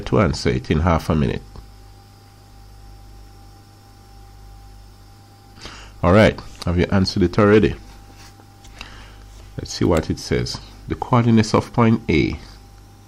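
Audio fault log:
No faults found in this audio.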